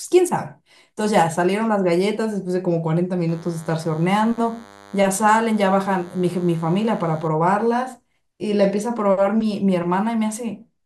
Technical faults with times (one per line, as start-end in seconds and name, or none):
3.28-7.28 DECT cordless phone buzz